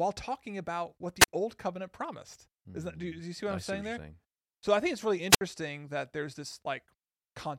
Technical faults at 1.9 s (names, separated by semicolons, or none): none